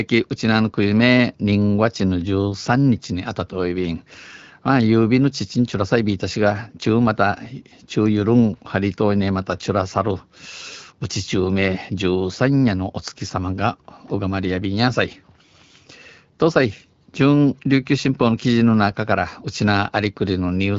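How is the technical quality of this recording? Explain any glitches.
No glitches turn up anywhere in this speech recording. It carries the character of AMR wideband (HD Voice) coding at 12.65 kbit/s, with the speech band handled by the codec's vocal tract model up to 6.4 kHz and the top edge to 7 kHz filled in with shaped noise, leaving the speech clear with only light coding colouration.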